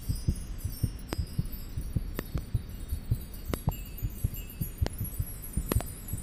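Loud pops at 1.13–1.15, 2.19–2.40 (double), 3.54–3.71 (double), 4.87–4.89 and 5.72–5.83 s (double) leap roughly 20 dB above the sound (about 25 dB for the last), likely from a voltage spike. Unlike a dropout, the sound continues uninterrupted underneath.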